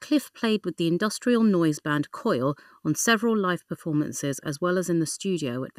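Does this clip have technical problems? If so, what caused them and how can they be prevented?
Yes. The speech carries channel delay (comb filtering) from start to finish. One channel arrives roughly 0.7 ms behind the other. When the two are summed to mono, the shared content cancels at evenly spaced frequencies. The first notch sits around 700 Hz, with more above it. The result is a hollow, phasey tone that never moves. To prevent it, align the channels before summing, or fold to mono from a single channel.

Generation loss also runs through the whole clip. The audio sounds swirly and smeared, and consonant attacks blur. It is more hollow than 128 kbit/s MP2 alone should sound. Nothing remains above 16 kHz. The likely cause is repeated decoding and re-encoding, perhaps around seven passes. Each pass requantises on a shifted frame grid, so noise and spectral holes pile up. To prevent it, keep a lossless master and encode to MP2 only once.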